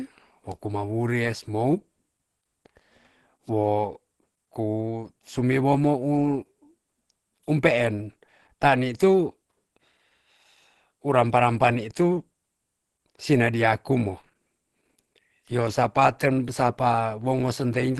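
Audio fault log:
throughout Opus compression, likely. Speech sounds plainly muffled and hoarse, with nothing above 12.2 kHz. This fits a hybrid-mode encode near 16 kbps.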